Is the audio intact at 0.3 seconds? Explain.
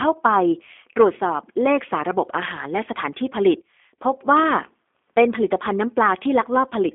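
No. The G.729 codec is at work at 0.3 s, as it is throughout the clip. The speech is rebuilt from a vocal tract filter, a pitch predictor and a few pulses per frame, which fits an 8 kbit/s codec, so it sounds slightly rough and synthetic. The line band runs from 250 Hz to 3.5 kHz, and nothing above 3.8 kHz comes through, leaving the speech thin and muffled.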